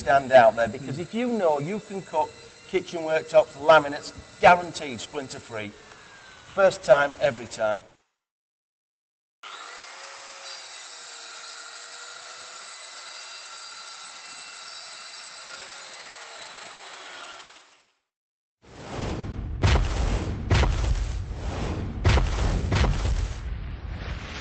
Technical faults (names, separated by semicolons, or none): repeated packet loss (robotic sound); burst of packet loss; lost packet rebuilt from error correction; short concealed packet loss